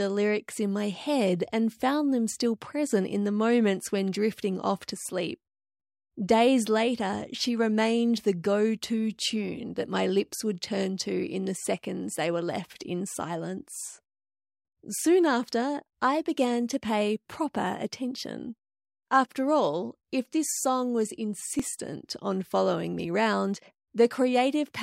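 At 15.04 s and again at 21.60 s the speech jumps abruptly, with no gap. Each jump is likely a dropped buffer (overrun): a few milliseconds of samples were overwritten before being read, so the surrounding audio is spliced directly together. On the waveform each shows as a sudden step where the signal's shape breaks mid-cycle. On a spectrogram it appears as a thin vertical broadband line.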